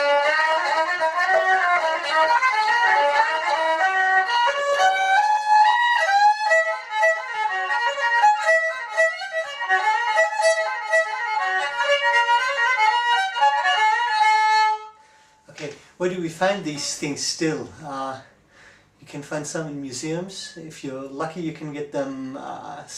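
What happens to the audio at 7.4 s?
Nothing goes wrong at 7.4 s; the audio plays through that moment without any audible fault.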